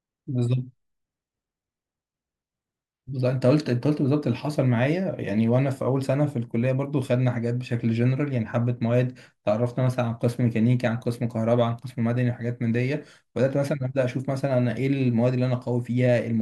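No technical faults are audible.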